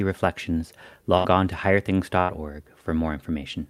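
Burst of packet loss at 1.17 to 1.26 s, just before "on to", and again at 2.20 to 2.31 s. Each time a short run of packets went missing, about 80 ms of audio in total. The receiver stretched the last sound it had for roughly 70 and 85 ms while fading it down, so a brief held buzz or dying hiss is heard. The speech then jumps ahead, with that stretch gone.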